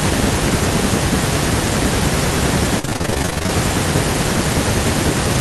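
Speech, with a burst of repeated packet loss (robotic sound) from 2.79 to 3.50 s. Over that stretch the audio keeps dropping out in short holes, the longest about 40 ms. Each hole is papered over by stretching the last bit of sound, so the speech turns choppy. Roughly half the span, about 370 ms, is this patched-in filler, while about 340 ms of the real signal is gone. The rapid chopping points to many lost or late packets in a row.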